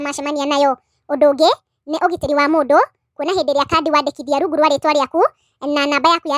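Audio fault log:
throughout: wrong sample rate. The speech runs about 1.45 times too fast and sits about 6.45 semitones high, giving a hurried, chipmunk-like quality from start to finish. Because speed and pitch rise by the same ratio, the samples are being played faster than they were captured, with no conversion, which fits audio recorded near 22 kHz and played at 32 kHz. A pitch shifter would keep the original pace, and time-stretching would keep the original pitch.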